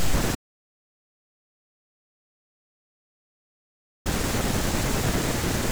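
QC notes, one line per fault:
0.35–4.06 s: audio dropout to silence. The speech cuts off and silence with no room tone fills 3.7 s, likely a lost input written as silence.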